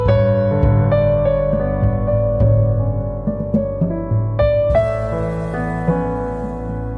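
No technical faults can be heard anywhere.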